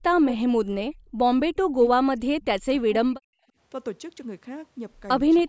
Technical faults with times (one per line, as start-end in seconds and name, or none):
0.05-1.00 speech suppressed in double talk
1.47-3.23 speech suppressed in double talk
5.41-5.48 speech suppressed in double talk